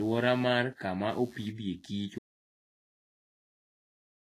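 Speech runs through this short clip with three technical faults. Underneath it from start to finish is computer activity noise: a buzzy, scratchy pulsing at around 100 Hz, roughly 30 dB below the speech. It comes from the computer's changing load moving the shared ground of the audio circuit. Its rise and fall follows the machine's activity, not the speech, which tells it apart from hum, whose level stays steady, and from codec artefacts, which appear only when speech is present.

The audio also has a hard ceiling: nothing is present above 14.2 kHz, and the speech carries the artefacts of heavy lossy coding. The likely cause is low-bitrate audio saved at a high bitrate. The sound points to a low-rate Vorbis encode, around 31 kbit/s, that was later re-encoded as a high-rate MP3, near 304 kbit/s. The second encode adds size but cannot restore the detail the first removed. A genuine high-bitrate MP3 would reach higher and sound clean, without the first codec's artefacts.

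At 2.19 s, right after "mar kamaopidhe kich", the audio drops out to silence and stays silent to the end. The gap is silent with no room tone, which separates it from a pause in speaking or a quiet passage. It was likely caused by the input being lost, through a disconnect or a mute, while recording carried on, so whatever followed is gone.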